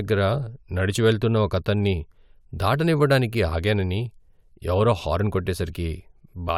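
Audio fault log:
No fault is logged for this clip.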